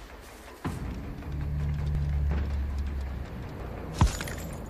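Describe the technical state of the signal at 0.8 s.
At 0.8 s the signal is intact, with no dropout, clipping, distortion or other technical fault at that point.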